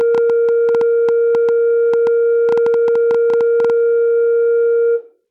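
Likely interference or a faulty connection injects a train of clicks from 0.01 to 3.71 s, about 7.3 per second at an uneven pace, ticking roughly 5 dB above the music.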